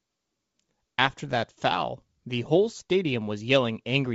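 Nothing in the speech signal points to a technical fault; it carries the familiar sound of G.722 wideband telephone coding, with intelligibility reaching up to about 7 kHz and only the faint upper-band hiss expected of that coding, which fits the full 64 kbit/s mode.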